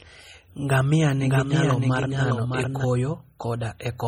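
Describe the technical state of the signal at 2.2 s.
At 2.2 s two faults overlap. The signal is most likely passing through a low-bitrate encoder, and the damage is consistent with MP3 compression at about 32 kbps. With so few bits, the encoder discards weak frequency lines frame by frame, so they flicker in and out. The result is heavy codec damage across the whole speech clip: a watery, swirly texture, metallic chirps on sibilants and smeared attacks. Nothing is present above 20.8 kHz.

The moment also falls inside a doubled audio track running from 1.17 s to 2.85 s. A second copy of the speech, likely captured again through a slower path or left in by an out-of-step edit, is mixed in about 5 dB below the original and trails it by roughly 0.7 s. Because the copy is full-band with no decay or room colour, it sounds like a clean, displaced repeat rather than an echo, and it cuts in and out abruptly at both ends.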